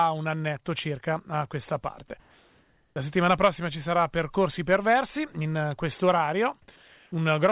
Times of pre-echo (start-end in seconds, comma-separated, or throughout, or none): none